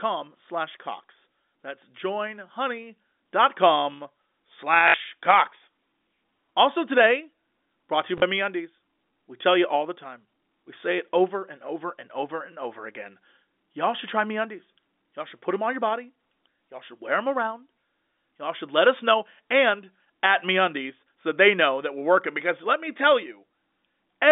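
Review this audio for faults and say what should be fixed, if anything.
Packet loss with last packet repeated occurs at 4.88 to 4.94 s (60 ms) and at 8.18 to 8.22 s (40 ms), just after "today brought to you". Each gap is filled by replaying the previous packet. The lengths fit 20 ms packets, so the repeats stutter with a buzz near 50 Hz. Proper packet loss concealment or forward error correction on the G.711 A-law telephone link would prevent these dropouts.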